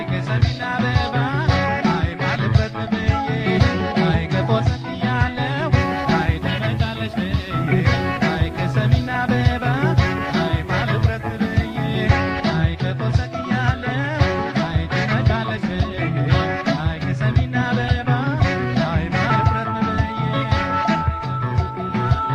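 Video or display buzz runs from 5.80 to 12.08 s. A screen or its video cable is coupling interference into the audio path, producing a raspy buzz at the 75 Hz field rate with fizzy hash above it, sitting roughly 20 dB below the wanted sound.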